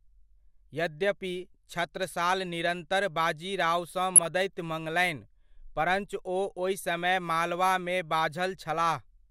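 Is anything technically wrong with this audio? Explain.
Yes. There is a burst of DAB burbling from 4.16 to 4.25 s, right after "यद्यपि छत्रसाल निरन्तर बाजीरावसँ". For about 0.1 s the speech carries short blips of noise in single frequency bands. Bit errors that slipped past the error correction have corrupted samples in the MP2 stream, putting short blips of noise into individual sub-bands. The burst spans six damaged frames, at a residual bit error rate of around 0.1 percent.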